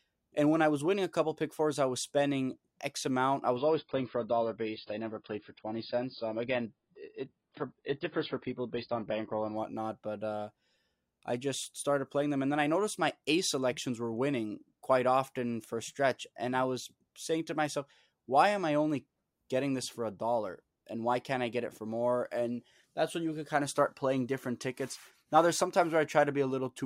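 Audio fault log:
3.57–9.57 s, adaptive stream at a lower bitrate: just after "amount I", the speech abruptly turns dull and swirly with no gap, as playback steps down to a much lower-bitrate version, which fits a drop from about 96 to 16 kbit/s. A spectrogram shows everything above 5.1 kHz sheared off flat.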